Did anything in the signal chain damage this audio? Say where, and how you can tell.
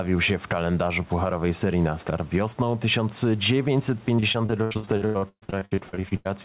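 Yes. At the capture stage, input gain that is likely set far too high for the microphone is being held in check by a fast limiter or compressor, producing gain pumping throughout the clip. Each loud moment in the speech pulls the level down, and in the gaps between the background noise swells back up, a swing of roughly 10 dB. Loud and quiet passages are squeezed close together, and the whole clip sounds flattened and breathing.

At the network stage, repeated packet loss produces robotic sound from 4.16 s to 6.27 s. Packets arrived late or not at all about two dozen times across that stretch, and the receiver filled each hole by extending the last sound it had. Those gaps, up to 131 ms long, make up nearly half of the span. The speech turns choppy, with short pieces missing before the next gap arrives. The band stops at about 4 kHz, in line with the narrowband call codec.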